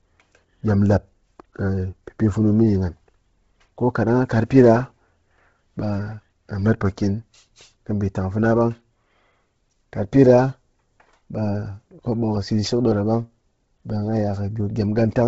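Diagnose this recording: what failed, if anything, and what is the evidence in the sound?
The codec stage failed: the speech was likely squeezed through Bluetooth LC3 compression at a very low bitrate, consistent with roughly 16 kbps in 10 ms frames. From start to finish the band stops dead near 7.7 kHz, and heavy codec damage leaves the upper spectrum hollowed out and refilled with synthetic noise. Consonants and vowels carry a breathy, grainy edge.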